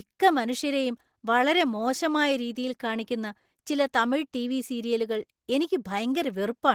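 Opus voice compression affects the speech from start to finish, with plainly audible damage. The low-band linear-prediction layer codes the excitation coarsely, making the voice hoarse and slightly robotic. The sound fits hybrid mode at roughly 16 kbps.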